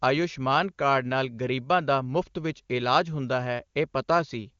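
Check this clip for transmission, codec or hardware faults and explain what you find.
No transmission, codec or hardware faults turn up in this clip.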